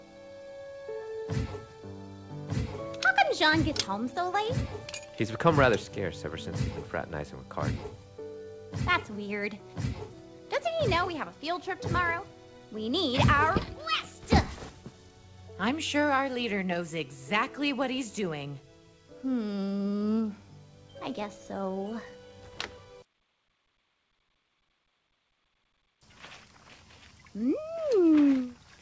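Nothing here sounds wrong, just audio that has come through a call connection, with the top end stopping around 8 kHz, which fits a wideband codec like G.722.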